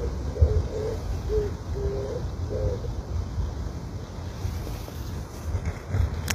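From start to finish the treble has that replicated sheen you get from HE-AAC compression, likely at a low bitrate around 24 kbps. The top end is rebuilt from copied lower bands rather than coded, so it sounds plainly gritty and metallic, with nothing above about 14.9 kHz.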